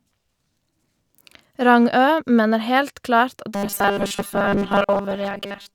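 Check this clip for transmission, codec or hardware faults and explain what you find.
Robotic sound from repeated short buffers runs from 3.55 s to 5.75 s, to the end of the speech. New audio is likely arriving too seldom, so playback fills the gaps by looping the latest 5 ms of signal while the real material is skipped. Most of that stretch is repetition, and the 5 ms loop imposes a fixed 200 Hz buzz. The speech turns into a rigid, metallic drone that only loosely follows the talking.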